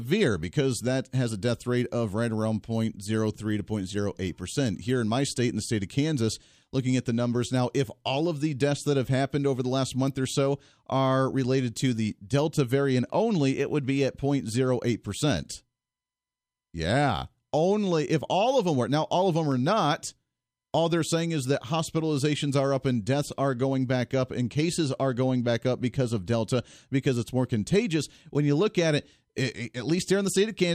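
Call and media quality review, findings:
Single sharp click in the speech at 19.52 s, thin vertical line across the spectrum. Dropped samples, likely a capture or buffer-handling slip: a tiny fraction of a millisecond missing, waveform jumps to a later value. No audible content lost.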